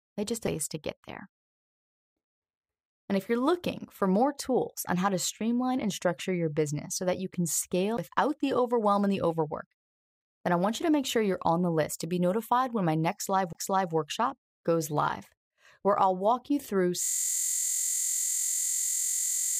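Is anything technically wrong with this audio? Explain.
Yes, there are two kinds of fault. CD skips occur at 7.97 s, after "so that you can", and at 13.53 to 13.55 s, after "be notified when my". The laser jumps tracks, giving a brief mute, a tick, and a discontinuity visible as a waveform gap.

A system hang loop starts at 17.03 s, after "I'll walk you through", and lasts to the end. A frozen 23.22 ms buffer repeats as a 43.1 Hz buzz, which fits a 1024-sample buffer. On a spectrogram it shows as evenly spaced vertical stripes.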